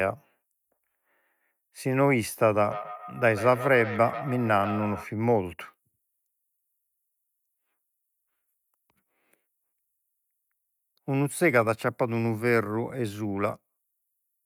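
From 2.64 to 5.07 s, a second device in the same room plays this call back into the microphone, creating a feedback echo between two devices. Neither echo canceller removes the other device's output, so the speech loops around. Each stretch of speech returns at a fixed interval of roughly 150 ms, thinner and more ringing than the original. The repeats peak at about 12 dB below the speech.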